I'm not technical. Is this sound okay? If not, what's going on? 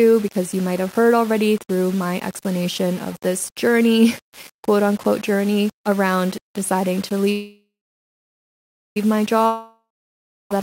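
No. Throughout the whole clip the speech has a rough, grainy edge, like fine sandpaper laid over it. The grit rises and falls with the voice, and the quietest moments sputter or break up instead of fading smoothly. This is low bit depth without dither. The sound has likely been stored with far too few steps of loudness, which fits about 6 bits, with each value simply rounded to the nearest step. That rounding error is heard as graininess that tracks the speech.

At 7.31 s, right after "journey around deciding to", the sound smears into a fading buzz and then goes quiet for about 1.3 seconds, until 8.97 s. When it resumes, it continues exactly where it stopped. Nothing is lost, but everything after that point now arrives about 1.6 seconds late. This pattern is a call audio freeze, likely caused by pieces of the call getting held up in transit while the receiving end ran out of sound to play.

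From 9.46 s to 10.51 s, just before "I had", the sound again trails off into a fading buzz, followed by roughly two-thirds of a second of silence. This time, when the audio returns, a stretch of about 1.15 seconds of speech is simply gone. This is a long network dropout. The likely cause is a long stretch of the call that never arrived, so the player skipped ahead past the part that was lost.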